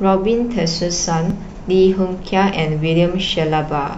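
Speech with two brief skips, at 1.30 to 1.34 s and 3.29 to 3.33 s, from overlap between stream segments. Each time, about 35 ms of audio is trimmed away and the waveform jumps. The two skips fall almost exactly 2 s apart, which fits 2-second segments with mismatched time stamps. A dropout or lost packet would leave a gap or mute; here nothing is silent, the sound just lurches forward.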